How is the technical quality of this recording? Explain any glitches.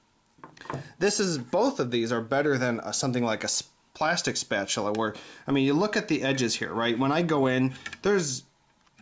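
Nothing stood out on listening to the recording; there were no glitches to explain.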